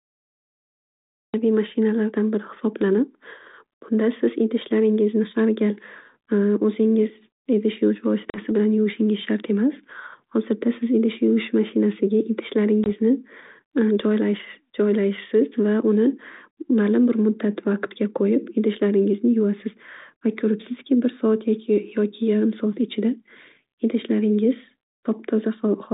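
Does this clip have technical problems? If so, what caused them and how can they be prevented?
Yes. A cut-off start leaves digital silence until 1.34 s, where speech begins mid-sound with no attack. A fade-in or noise gate would rise gradually instead. Starting capture with a short pre-roll prevents it.

Packet loss on an ADPCM call cuts hard holes of 40 ms at 8.3 s and 20 ms at 12.84 s, roughly a couple of packets and then one. Each time, speech returns with brief distortion while the decoder's predictor and step size resynchronise. A plain dropout would resume cleanly. A steadier network link with packet loss concealment prevents this.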